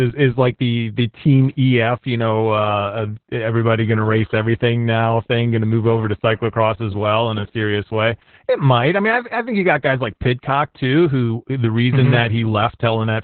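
From start to finish the speech carries heavy Opus voice compression: nothing above about 4.3 kHz, muffled and hoarse, pointing to a very low bitrate around 8 kbps.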